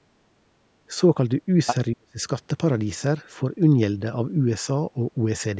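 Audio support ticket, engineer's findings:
Speech suppressed in double talk. 0.88 to 0.92 s: brief shallow dip, roughly a few dB, about 40 ms. 1.93 to 2.22 s: near-total dropout, roughly 40 dB down, about 300 ms. Likely cause: echo canceller in the call microphone processing mistaking near-end speech for loudspeaker echo while both sides talk, then attenuating it. Band tops out at 8 kHz through that same processing chain.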